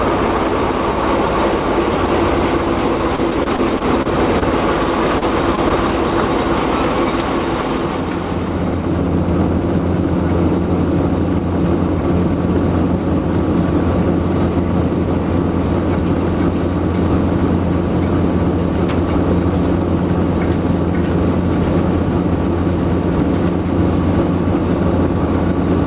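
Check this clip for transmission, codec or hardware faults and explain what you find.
Yes, there are packet-loss faults in the transmission. Everything above 4 kHz is missing, which points to a narrowband call codec such as G.711 mu-law.

Repeated packet loss (robotic sound), 3.16 to 4.43 s: packets were lost or arrived late seven times in this stretch, about 80 ms in total, and the longest gap was 28 ms. The receiver patched each gap by extending the preceding audio, which accounts for about 12 percent of the stretch. Because the patches come one after another, the passage sounds choppy and robotic, with fragments dropped out.

Short concealed packet loss, 5.19 to 5.23 s and 5.55 to 5.59 s: each time, about 20 ms of audio failed to reach the decoder in time. The decoder covered the gap by continuing the last sound and then blended back into the received signal, with 22 ms and 18 ms of fill respectively. 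Each one is heard as a brief smear or wobble, and a short sound falling in the gap can disappear.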